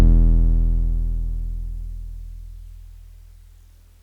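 From 0.32 to 3.35 s, about four clicks recur every 1.01 s in the music. These are clock drift buffer slips, likely from two clocks about 150 ppm apart.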